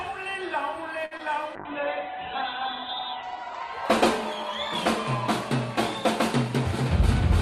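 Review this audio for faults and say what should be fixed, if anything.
At 1.05 to 1.13 s the sound hangs on a single moment for about 58 ms, a held stretch, and then resumes exactly where it stopped with nothing skipped. This is a short stall from a late packet. The packet missed its playout time, the jitter buffer ran dry, and the receiver extended the last sound until the packet arrived, adding 58 ms of delay. A deeper or adaptive jitter buffer would absorb this.

Just after, at 1.17 to 1.21 s, there is a brief smear, a small wobble rather than a clean continuation. About 20 ms of audio is gone, and roughly 18 ms of that gap was covered by extending the preceding sound before blending back into the real signal. This is short concealed packet loss: the data never reached the decoder in time, so the receiver improvised a stand-in. Forward error correction or redundant packets would protect against this.

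From 1.56 s to 5.81 s the sound turns rough and muffled, losing its top end, and it is at its worst for about 1.7 s. This is a call bitrate drop: the bandwidth estimate collapsed, pushing the encoder from 64 kbps down to 8 kbps. At that rate Opus codes coarsely and narrows the audio band from 20 kHz to 4 kHz. More stable network capacity, or a less aggressive congestion response, would prevent it.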